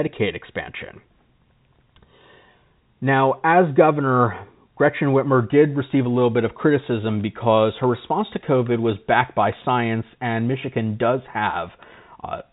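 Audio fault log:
No fault to log for this speech.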